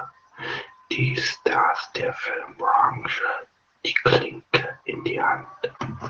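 Opus voice compression is plainly audible across the whole speech clip. The sound is cut off above about 8 kHz, and the coarse excitation coding leaves the voice muffled, hoarse and faintly robotic. This points to Opus in SILK wideband mode at a low bitrate of around 12 kbps.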